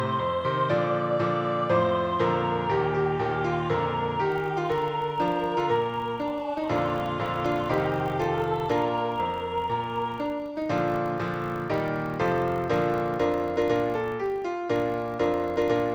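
From 4.32 s to the end of the clip, a filter restarted on every block produces a steady 50 Hz buzz. The filter discards its internal state at each block boundary and starts again from silence, so every block opens with a small transient. Those transients repeat every 20 ms, which fits a 50-blocks-per-second processing rate, and they merge into a rough buzz whose strength rises and falls with the level of the sound.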